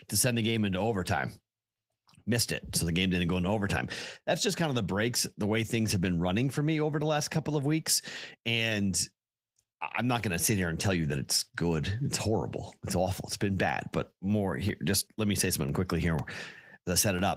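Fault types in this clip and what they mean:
Periodic USB or driver dropouts: something on the system briefly stalls the USB bus or the audio driver every 0.5 s, and each stall loses a sliver of audio, roughly 2 ms, which is replaced by silence. In this speech clip the gaps start at about 13.69 s and repeat until about 17.19 s, around seven in all. They are heard as a steady, evenly spaced train of ticks cutting into the speech.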